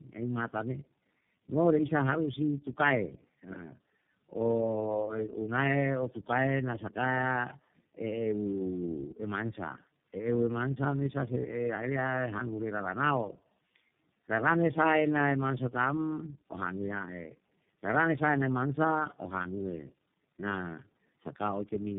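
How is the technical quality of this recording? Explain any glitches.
The quality is poor throughout. The whole recording carries one fault, tandem speech coding. It runs from start to finish. The speech sounds rough, muffled and warbly. Nothing is heard above about 3.8 kHz. The call appears to have crossed several networks. Each border decoded the speech and coded it again. Each coder then worked on the previous coder's damaged output, so the errors stacked up. The sound fits three low-rate speech codecs in a row, the last resembling iLBC.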